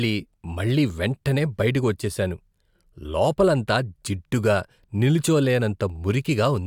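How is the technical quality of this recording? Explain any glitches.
No glitches turn up anywhere in this speech recording, so there is nothing to explain.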